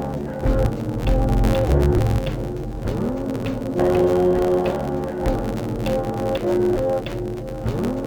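From start to finish, this one has interleaved audio read as planar: each 11.61 ms chunk, which fits a 512-sample buffer, gets its alternating channel samples split into halves. Blocks that short give a dull, robotic sound with an 86.1 Hz buzz, not a clear octave drop.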